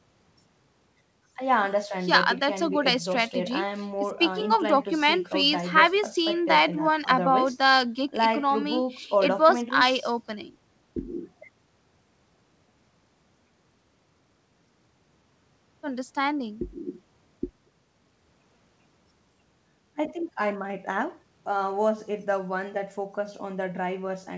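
No technical faults can be heard in this speech recording.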